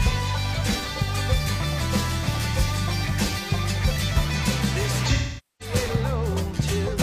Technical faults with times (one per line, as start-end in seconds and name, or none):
5.09-5.75 AAC frame loss with concealment